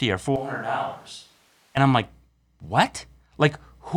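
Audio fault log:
0.36 to 1.77 s, switch to a distant microphone: the close microphone's feed likely dropped out, leaving only a pickup much farther from the talker. The speech abruptly turns hollow and roomy, right before "I'm like", with thinner bass and a level roughly 10 dB lower, while room noise rises to around 30 dB below the speech because the far pickup hears more of the space relative to the source. The close sound returns just as suddenly.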